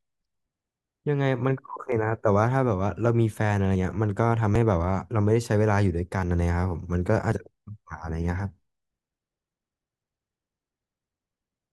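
Speech with five points where the sound jumps forward, at 1.92, 3.76, 4.56, 6.23 and 7.32 seconds. Each skip removes a brief slice, roughly 10 to 30 ms, with no silence between the joined sides. This is likely a dropped buffer (overrun), where captured samples were overwritten before collection.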